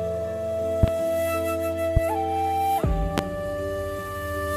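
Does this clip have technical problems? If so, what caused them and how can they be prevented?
Yes. Loud pops break through at 0.83 to 0.91 s (a quick double pop), 1.97 to 2.00 s and 3.18 to 3.21 s, each peaking roughly 20 dB above the surrounding sound, which carries on underneath. The likely cause is a sudden voltage step or pulse from a loose plug, switch contact, static discharge or driver glitch, shaped by the following circuitry into a short thump. On a waveform each appears as a tall spike; a spectrogram shows a brief vertical broadband stripe. Securing connectors, grounding against static and updating audio drivers would prevent these pops.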